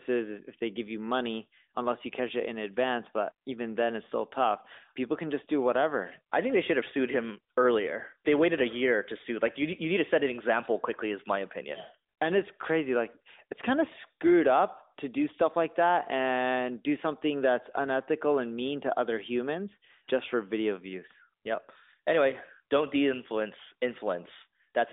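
Nothing is technically wrong with the speech in this clip.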